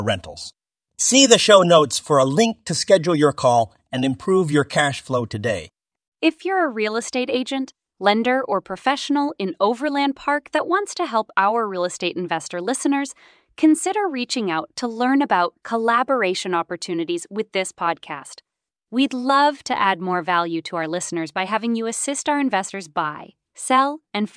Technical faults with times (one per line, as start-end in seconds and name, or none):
none